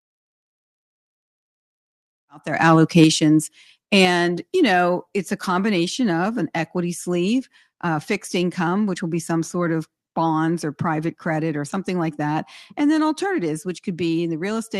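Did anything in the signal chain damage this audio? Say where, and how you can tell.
Yes. From 2.68 to 3.04 s, after "about diversification about their", the loudest peaks sound harsh and crackly. Their tops are flattened about 2 dB past full scale, on a small share of samples. This is microphone overload, likely at the converter, from excessive input gain.

At 4.05 s, voice and background drop together by about 6 dB in a single step, just before "you know it's a". This is microphone volume stepped down. Call processing likely reacted to the clipping by cutting the device's input gain.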